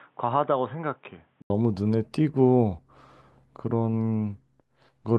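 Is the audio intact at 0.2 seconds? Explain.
No. From the start through 1.5 s the speech is dull and boxy, with nothing above 3.8 kHz, noticeably quieter, and sitting on a faint new noise floor well below it. That points to an input switched to a poorer device, likely a fallback microphone or a headset's narrowband call profile, before the system hands back to the proper input. At 1.5 s there's an 80 ms gap, then the full, brighter sound returns.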